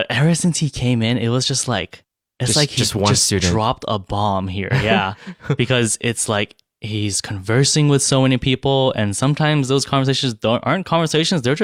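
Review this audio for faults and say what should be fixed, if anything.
Nothing stood out on listening to this speech recording, so there is nothing here that needs fixing.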